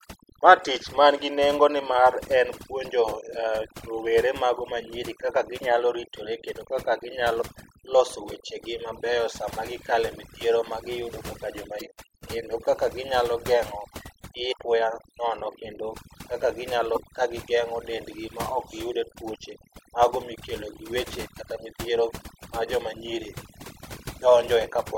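Throughout the speech, overdone noise removal is audible. The reduction was set so aggressively that individual frequency bands near the noise floor are pulled down or gated off, taking quieter parts of the voice with them. Pauses drop to near silence with twinkling specks. A spectrogram shows scattered isolated dots and a patchy, hollowed texture.

Damaged data in a compressed stream causes brief blips at 7.41 s and from 11.77 to 11.81 s, 14.49 to 14.53 s, and 16.93 to 16.97 s. Corrupted bytes made the decoder misread frames and lose sync. These appear as narrow vertical smears of broadband energy and small waveform discontinuities.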